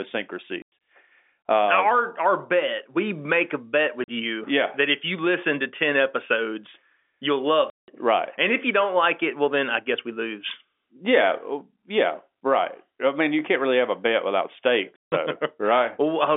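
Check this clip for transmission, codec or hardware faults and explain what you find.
There is one fault: packet loss filled with silence. It occurs at 0.62 to 0.72 s, at 4.04 to 4.08 s between "we make a bet" and "you yeah that if", at 7.7 to 7.88 s after "episodes you'll", and at 14.96 to 15.12 s after "have a bet without". Lost packets were replaced with silence. The result is hard-edged gaps of 100, 40, 180 and 160 ms, all multiples of 20 ms packets. The telephone-band G.711 coding, passing roughly 250 Hz to 3.5 kHz, is not at fault.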